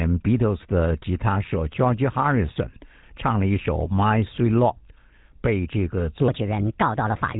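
The whole clip has passed through the GSM full-rate codec, whose excitation is rebuilt from sparse, regularly spaced pulses. That leaves the speech plainly buzzy and gravelly, with nothing above 3.8 kHz, a sound that fits GSM's 13 kbps full rate. From 6.28 s, just after "被这个", to the end at 7.40 s, a section at the wrong speed plays 1.33 times too fast, likely from being fitted to the wrong clock. Pitch jumps about five semitones with it, so the voice turns high and hurried.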